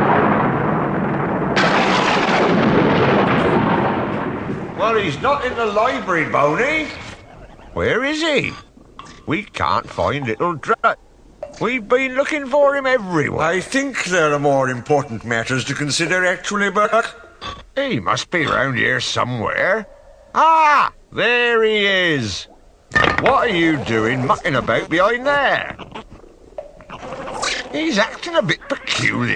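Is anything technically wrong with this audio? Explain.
Yes. Frames out of order occur at 1.04 to 1.26 s, 10.73 to 10.95 s, and 16.85 to 17.01 s. In each, two adjacent blocks of about 104.5 ms (78.4 ms in the last) play swapped, giving a garbled flutter. Unlike a dropout, no time goes missing.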